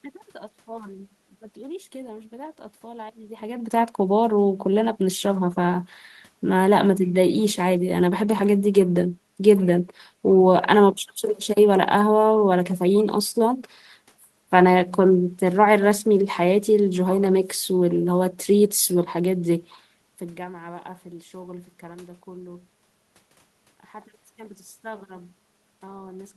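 No technical faults can be heard in the recording. Some background noise from the room sits under the speech, and the level shifts around 3 s and again near 20 s, as when a talker moves relative to the microphone.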